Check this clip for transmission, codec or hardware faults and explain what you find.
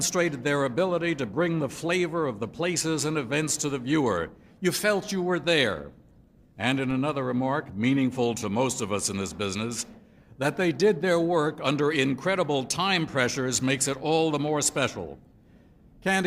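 There's one hardware-type fault: a DC step at 6.91 s. The waveform's zero line suddenly jumps by about -32 dBFS, the kind of thing you get when a converter recalibrates or an input carrying an offset gets switched in. The offset then drains away at a rate that fits a 20 Hz high-pass filter in the chain. You hear it as a low thump or click right at that moment, while the sound itself carries on unchanged.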